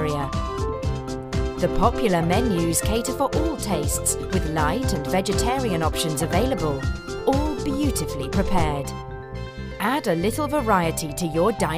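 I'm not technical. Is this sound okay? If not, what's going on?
Yes, nothing stood out on listening, and it sounds fine.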